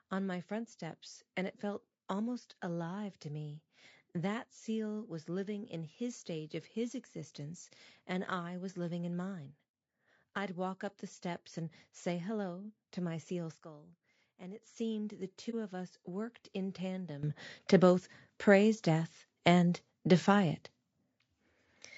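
The speech sounds rough and grainy from start to finish. There is noise between the harmonics, and the top band sounds thin and synthetic. The damage is plainly audible. This is likely low-delay AAC compression of the AAC-ELD kind. Its short frames resolve pitch harmonics poorly, and the grain fits a bitrate around 32 kbps. At that rate there are too few bits to keep the harmonic structure clean.

At 13.55 s, right after "hello to my seal", there is a sudden gain jump. The level falls by about 12 dB between one sample and the next. Speech and background noise drop together. At 14.63 s the level snaps back up just as abruptly. Neither change has a ramp. This sudden switch is what makes each edge audible.

At 15.50 s, after "seemed the", there is a brief soft hole of about 30 ms, ending by 15.55 s. This is AAC frame loss with muting, consistent with one lost frame. The decoder filled that frame with silence. 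The overlapping windows fade the sound out and back in, so the gap has soft edges. Speech resumes with "of us worked in".

At 17.23 s, after "of us worked in", a second sudden gain jump raises the level by about 12 dB in one step. Voice and background noise rise together. The raised level holds to the end at 21.98 s.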